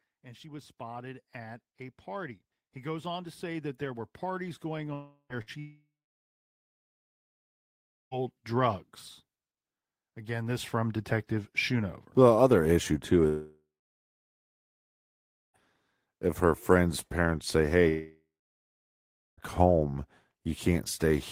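From 4.93 to 5.33 s, and again from 5.59 to 8.14 s, 13.27 to 15.57 s and 17.88 to 19.40 s, the last sound is held as a fading buzz or hiss that settles into silence before the speech resumes further on. These are likely long network dropouts, where no audio arrived and the receiver concealed the gap. Between the first two, from 5.42 to 5.50 s, a brief held buzz or hiss replaces about 60 ms of audio: a burst of packet loss.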